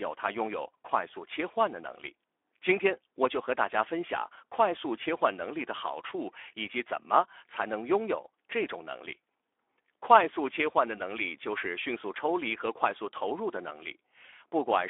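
A speech recording carries Speex codec damage from start to finish, and it is plainly audible. The voice sounds grainy and hoarse because this CELP coder, at a rate that fits roughly 11 kbps, has too few bits to model the excitation cleanly. The audio is confined to a telephone-style band of about 300 Hz to 3.5 kHz, and nothing is present above 3.7 kHz, so the top end is missing entirely.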